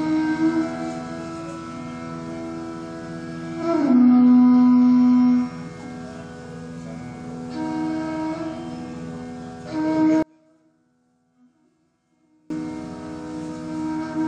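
Between 10.23 and 12.50 s, the audio collapses to about 34 dB below its surrounding level, and the background drops out along with everything else rather than being left behind. The likely cause is one channel inverted: with one side of a stereo pair flipped in polarity, the content common to both channels cancels when they are combined into mono. Only the difference between the two channels remains, which is why so little is heard until 12.50 s.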